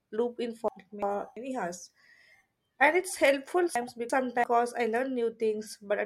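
Chunks out of order occur at 0.68–1.37 s, after "loop in", and at 3.76–4.44 s, after "it's helpful". A 0.34 s chunk arrives one chunk late. The sound jumbles briefly.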